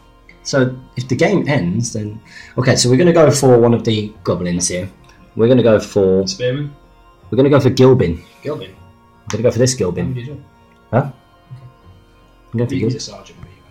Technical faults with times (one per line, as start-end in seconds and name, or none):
none